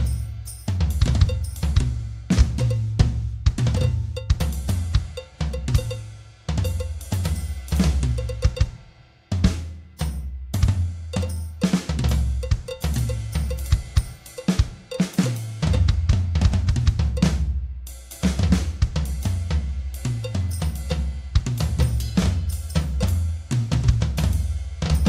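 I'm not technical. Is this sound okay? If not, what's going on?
Yes, this one's fine; nothing in it sounds broken or out of place, so there's nothing to worry about.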